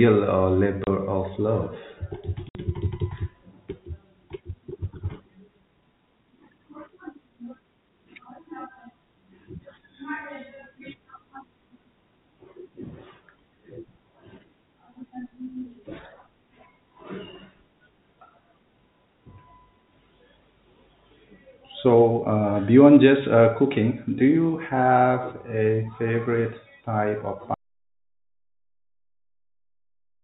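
Speech heard through G.711 telephone coding, band-limited below 4 kHz, is broken by packet loss filled with silence at 0.84 to 0.87 s and 2.49 to 2.55 s. The holes last 30 and 60 ms, whole multiples of what sounds like a 30 ms packet, and each has abrupt edges. Their short, quantised lengths set them apart from a device dropout. From 27.54 s to the end, the sound cuts out to silence with no room tone. This is an audio dropout to silence, likely from a lost input or mute while recording continued. Unlike packet loss, it is one long, unbroken gap that never returns, and its sudden edge rules out a fade.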